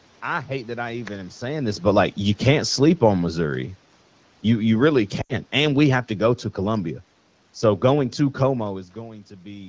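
From 4.49 s to 6.89 s the automatic gain is falling: the gain control reduces its gain by about 4 dB over roughly two and a half seconds, so the speech and the room background sink together rather than the voice alone fading.

Within that stretch, from 5.21 s to 5.34 s, lost AMR speech frames cause a gap of about 80 ms, consistent with four 20 ms wideband frames being discarded. The decoder's concealment repeats the last good parameters at decreasing gain, so the sound drops to near silence before the speech returns.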